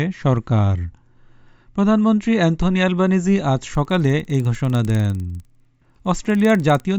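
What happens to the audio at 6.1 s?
At 6.1 s the sound carries a steady 20 Hz ticking from a resampler restarted on every block, running from 3.7 s to the end of the clip. Each 50 ms block was converted from 16 kHz to 48 kHz alone. Its edges lack true neighbours, so every boundary ticks.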